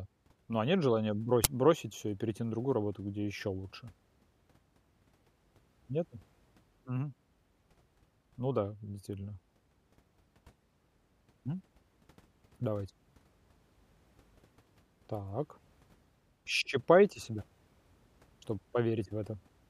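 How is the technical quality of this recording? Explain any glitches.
One glitch stands out in the speech. An uninitialised buffer fault hits at 1.44 s, between "а нет желания" and "бросить всё и перейти". A block of about 10 ms was sent to playback before any audio had been written into it, so leftover memory contents were read out as samples. The result is a brief, loud crack.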